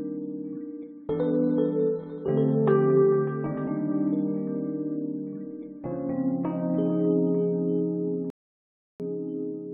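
A music clip with a rebuffering stall near the end: at 8.30 s the sound drops to silence for about 0.7 s, then picks up at 9.0 s exactly where it left off. The player simply ran dry of downloaded audio and waited, so nothing's missing, just about 0.7 s of extra time.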